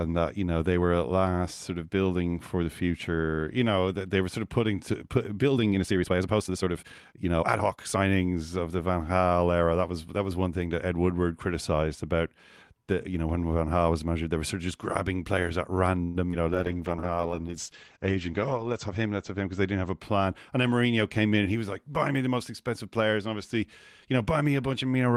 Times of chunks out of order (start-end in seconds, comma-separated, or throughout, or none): none